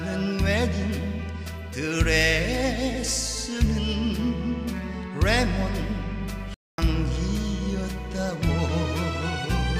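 At 6.54 s a playback stall silences the sound for 240 ms, likely from the player starving for data. That gap is noticeable.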